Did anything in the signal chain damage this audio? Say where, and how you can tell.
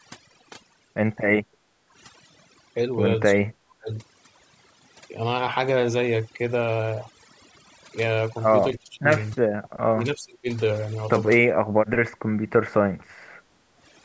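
Yes. Overdone noise removal in the call processing runs throughout. The background sits near silent with twinkling specks. Unlike a simple gate, it removes individual frequency bands.

The background is gated by the echo canceller at 1.47–1.93 s and 12.97–13.77 s. Room tone dips by about 11 dB and then recovers.

At 3.34–3.9 s, 8.75–9.07 s and 9.48–10.48 s, the speech itself dips, dropping by up to roughly 40 dB. The likely cause is speech suppressed in double talk, with both sides talking at once.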